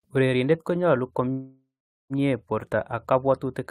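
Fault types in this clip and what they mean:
Call audio freeze: from 1.31 s a fading buzz then 0.44 s silence; sound resumes intact at 2.13 s, likely from delayed packets draining the jitter buffer.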